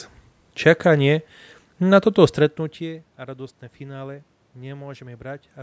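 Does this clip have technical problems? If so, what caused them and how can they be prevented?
No, there are no technical problems in this speech recording. The call microphone processing leaves nothing above 8 kHz, some room noise sits in the background, and the level shifts around 2 s as the talker moves relative to the microphone.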